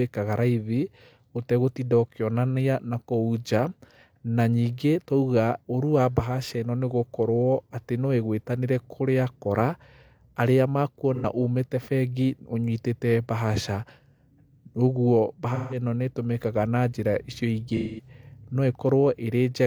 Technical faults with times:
11.14-11.25 AAC frame loss with concealment
15.54-15.78 AAC frame loss with concealment
17.76-18.08 AAC frame loss with concealment

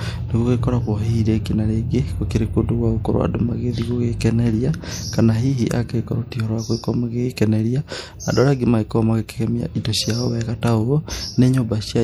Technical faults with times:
0.00-12.04 MP3 compression

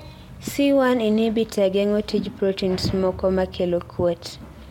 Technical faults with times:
none

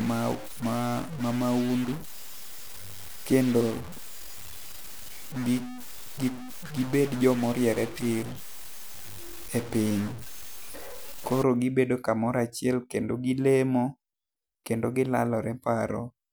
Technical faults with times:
0.00-11.43 stuck bit

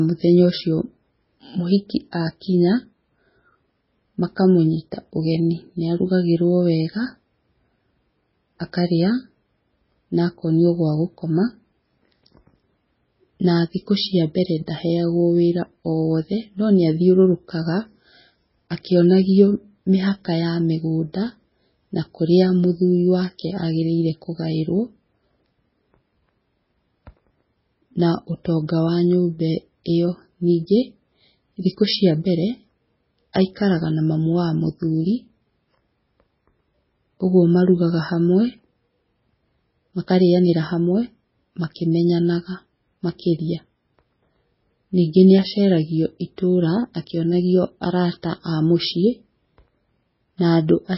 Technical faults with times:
0.00-50.97 MP3 compression
2.12 pre-echo
33.33 pre-echo
48.22 pre-echo

